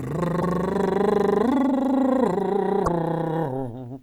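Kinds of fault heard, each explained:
Broken MP3 bit reservoir: at 0.41 to 0.43 s and again at 2.84 to 2.88 s, the music jumps ahead and a brief garbled glitch of 30 to 40 ms takes its place. The likely cause is missing MP3 frames. Each frame borrows leftover space in earlier ones, so after the gap the next frame reaches back for its data, reads another frame's bytes and decodes nonsense. Each glitch spans one or two 26.1 ms frames.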